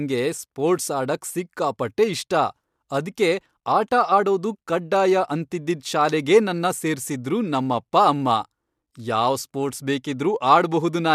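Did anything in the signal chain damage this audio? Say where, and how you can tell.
No, no signal chain damage.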